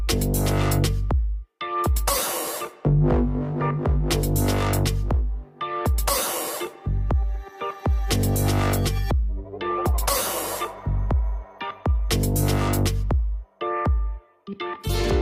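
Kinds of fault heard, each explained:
No technical faults are audible in this audio.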